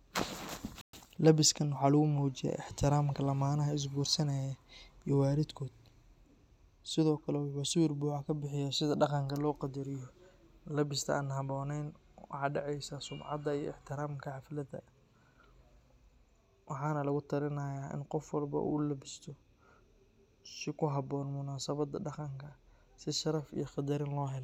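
At 0.81 s the speech cuts out abruptly. Silence holds for 120 ms, until 0.93 s, then the sound resumes. This is a playback stall. The player likely ran short of data or was briefly blocked, so output went silent mid-flow.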